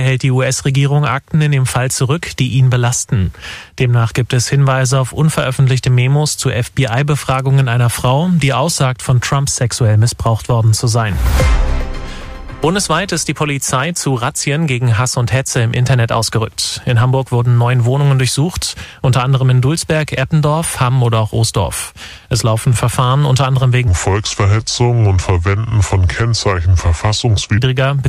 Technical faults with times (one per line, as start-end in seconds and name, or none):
23.88-27.58 section at the wrong speed